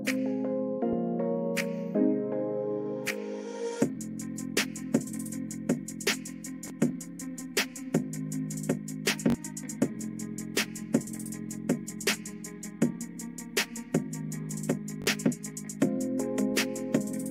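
Repeated buffers at 6.68–6.70 s, 9.30–9.34 s and 15.02–15.06 s: late data made playback replay a roughly 21 ms chunk (fits a 1024-sample buffer), giving brief hard-edged stutters.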